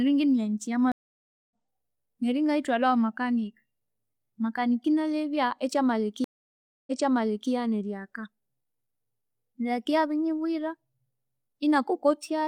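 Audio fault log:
0.92–1.51 s, stream reconnect: the connection dropped after "ingiminya nyithi", and the player went silent for 0.59 s before reconnecting with a fresh decoder. Playback resumes at a point roughly 0.7 s further on, so that stretch of speech is skipped.
6.24–7.51 s, stream reconnect: a second break after "inalebya ekyamaleka" gives 0.63 s of silence. On reconnecting, the server resent buffered data, so the speech restarts 0.64 s earlier and a short section is heard twice.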